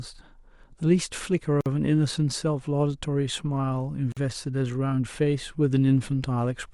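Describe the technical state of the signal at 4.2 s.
A gap at a join of encoded pieces, 4.12 to 4.17 s: untrimmed encoder padding drops about 46 ms of silence into the speech, showing as a blank vertical strip with smeared edges.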